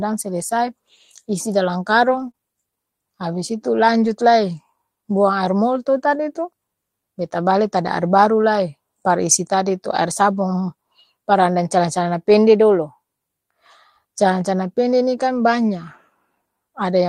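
A speech recording in which lost packets were rebuilt from error correction at 2.07–2.29 s, 4.03–4.09 s, 5.55–5.57 s and 15.35–15.41 s. Each lost stretch was replaced by the low-bitrate copy carried in the following packet, so the audio has no gap but sounds rougher and noisier. The longest, about 120 ms near 2.1 s, points to six separate lost packets. Right after that, at 2.31–2.35 s, there is a short concealed packet loss. About 20 ms never arrived, and the decoder filled it by extending the preceding sound and blending back in, which produces a brief smear or wobble.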